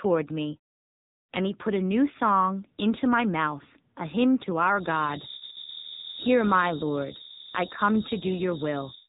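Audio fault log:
throughout: AMR narrowband mobile codec. Nothing above 3.9 kHz survives, so the speech sounds boxed-in and telephone-like, and the damage is plainly audible as a buzzy, synthetic edge on the voice, which points to a low rate of around 8 kbps. Unlike a simple low-pass filter, which only dulls the top end, the codec rebuilds each 20 ms frame from a vocal-tract model and a few pulses. That rebuilding is what gives the artificial, rasping texture.
4.72 to 9.08 s: feedback whistle. Right after "mouth a hymn to", a thin, steady tone at 3.8 kHz appears and holds to the end of the clip, sitting about 10 dB below the speech and swelling and fading slowly in level. This is likely a loudspeaker-to-microphone loop poised just at the edge of feedback, so one frequency keeps ringing without building up. Full howl-round would swell quickly and grow louder, and mains hum would sit low in pitch. 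This tone stays high, thin and roughly constant.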